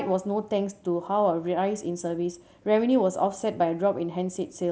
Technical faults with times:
none

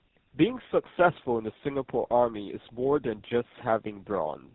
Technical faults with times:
0.00-4.55 tandem speech coding

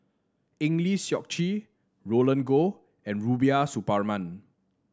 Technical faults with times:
none

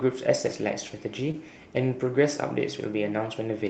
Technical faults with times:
0.45-0.55 lost packet rebuilt from error correction
1.27-1.29 lost packet rebuilt from error correction
1.31-1.36 short concealed packet loss

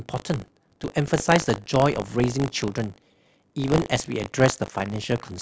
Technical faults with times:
0.00-5.42 buffer tearing

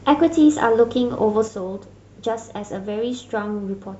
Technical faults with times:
1.48-3.99 one channel drops out

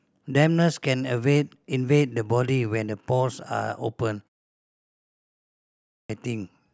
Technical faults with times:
4.73-6.10 clipped start after a pause

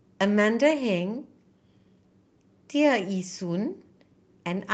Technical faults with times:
none

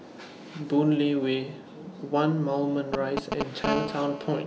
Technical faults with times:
2.94-3.66 GSM signalling bursts
3.67-4.42 GSM phone buzz

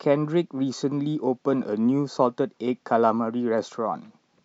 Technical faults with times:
none

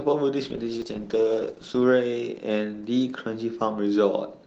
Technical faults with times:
0.46-1.91 call bitrate drop
0.82 dropped buffer (overrun)
1.70 dropped buffer (overrun)

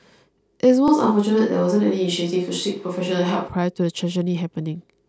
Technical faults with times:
0.88-3.48 switch to a distant microphone

